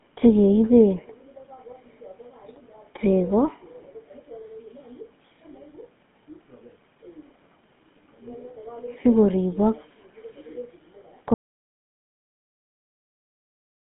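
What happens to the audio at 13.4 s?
At 13.4 s the audio has dropped out to silence. The input was likely lost, through a disconnected device or a failed link, while the recorder kept writing zeros. From 11.34 s to the end the speech stops mid-flow and leaves dead silence with no room tone, and nothing comes back.

The whole clip also passes through the GSM full-rate codec at 13 kbps. This codec models the vocal tract and drives it with sparse pulse excitation, and it passes nothing above 3.7 kHz. Before the cut this gives the speech a plainly audible buzzy, gravelly roughness, but at 13.4 s there is no sound left for it to colour.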